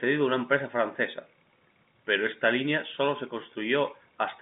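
No technical faults are audible.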